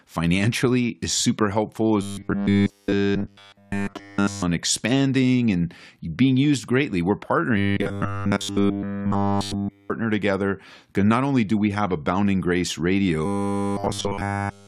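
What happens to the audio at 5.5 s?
Nothing goes wrong at 5.5 s: the speech there plays through intact, with no dropout, click, distortion or other fault.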